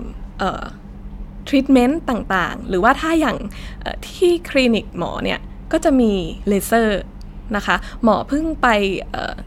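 No technical faults can be heard anywhere in the speech.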